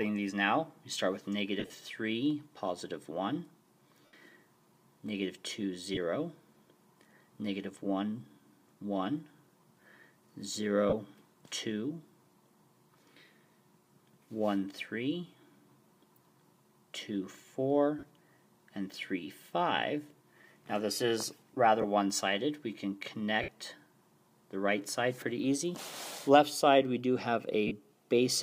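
Bluetooth LE Audio frames were lost eight times. Each time the LC3 decoder filled the gap by replaying the last spectrum with randomised signs, so tones smear into brief noisy patches. This happens at 1.59 s (about 83 ms, scattered across 135 ms), 4.06 s (75 ms), 5.94 s (23 ms), 10.89 s (30 ms), 17.99 s (38 ms), 21.81 s (23 ms), 23.42 s (60 ms) and 27.67 s (38 ms). The gap lengths fit 7.5 ms frames.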